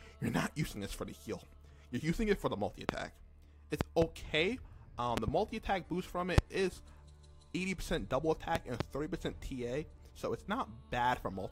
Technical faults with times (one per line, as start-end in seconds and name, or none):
2.89-2.91 loud pop
3.81-4.04 loud pop
5.17-5.30 loud pop
6.38-6.40 loud pop
8.55-8.83 loud pop